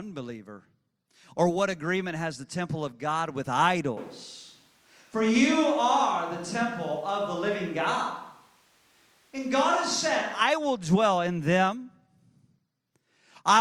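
Speech clip where, from 3.97 to 10.41 s, just before "will dwell in them", the sound turns abruptly hollow, thinner and roughly 5 dB quieter, likely a switch to a distant microphone. The waveform steps down, and the spectrogram shows weaker lows plus a noise floor roughly 35 dB under the speech.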